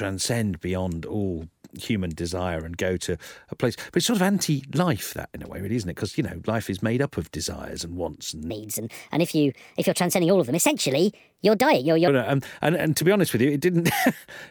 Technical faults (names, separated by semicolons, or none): section at the wrong speed